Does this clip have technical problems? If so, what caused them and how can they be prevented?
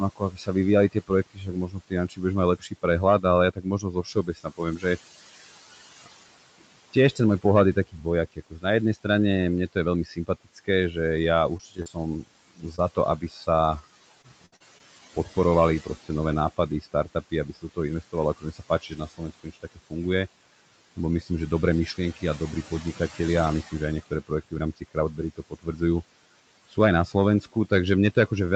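Yes. Hard clipping puts a gritty crackle on the loudest peaks throughout, because the signal was driven about 8 dB past what a stage could pass, so only a small fraction of samples had their tops cut flat, adding harsh high harmonics. Lowering input gain so peaks stay below full scale would prevent it.

Noise suppressor artifacts run through the whole clip: the background sinks by about 17 dB between phrases and surfaces under speech. The suppressor applies frame-by-frame band gains to what it treats as steady noise. A gentler suppression setting would reduce this.

Speech cut by the noise suppressor leaves soft consonants and word endings swallowed from 0.16 to 4.84 s, from 6.04 to 19.92 s, and from 20.96 to 28.56 s. The suppressor mistook quiet speech for noise and pulled it down by about 18 to 19 dB, totalling roughly two seconds in the middle stretch. Less aggressive suppression or better mic placement would prevent it.

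Scattered short gaps cause brief ticks and smeared hiccups between 10.83 and 13.12 s. About four small holes, the longest around 40 ms, totalling 80 ms, were patched by extending the preceding sound after lost or late packets. A steadier network or larger jitter buffer would prevent them.

Repeated packet loss (robotic sound) makes the audio choppy from 14.22 to 14.82 s. Four dropouts totalling 140 ms, the longest 62 ms, arrived in quick succession, so nearly a quarter of that span is concealment stitched from the previous sound. A more stable connection with forward error correction would prevent it.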